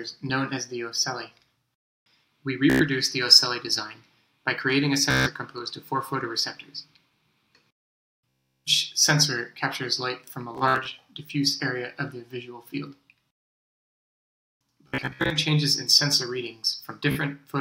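The audio has Bluetooth stutter at 2.7, 5.11, 8.49, 10.55, 14.88 and 17.12 s. Lost or late packets made the receiver replay its last buffer.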